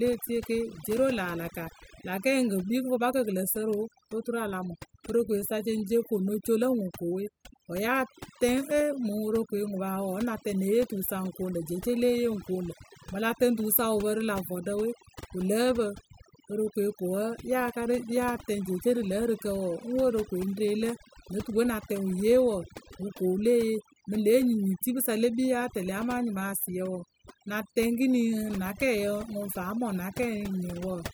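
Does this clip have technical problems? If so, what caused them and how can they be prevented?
Yes. Throughout the speech, the background drops to near silence broken by twinkling specks. This is overdone noise removal: a noise reduction process set too strong pulls individual frequency bands far down or out whenever they sit close to its noise estimate, so the quieter parts of the voice are removed along with the noise, leaving isolated bands flickering in and out. Preventing it means applying gentler reduction, or less of it.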